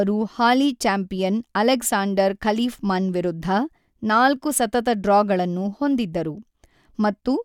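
Nothing here needs flagging, as the speech comes through without any technical fault to point to at any moment.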